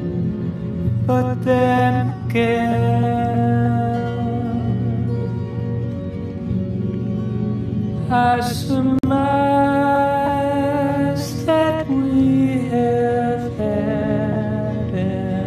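At 8.99 s a gap at a join of encoded pieces opens for about 48 ms, to 9.03 s: encoder start delay and last-frame padding left in where separately encoded pieces meet. Unlike a dropout, nothing is lost; the sound resumes exactly where it stopped, with smeared edges.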